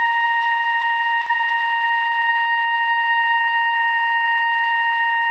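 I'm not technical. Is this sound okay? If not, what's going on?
No. Around 1.21 to 1.28 s there is a short stall from a late packet. One chunk of the music arrived late over the network, and the small waiting store of incoming audio ran empty. The player stretched the last bit of sound for about 50 milliseconds until the chunk turned up, then carried on where it left off. Nothing is lost, but that moment hangs slightly too long, with a faint buzz or dip, and the music then runs about 50 milliseconds later.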